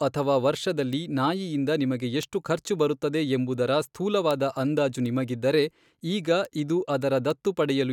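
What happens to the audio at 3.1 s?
Nothing goes wrong at 3.1 s; the speech carries straight through that moment with no dropout, click, distortion or other fault.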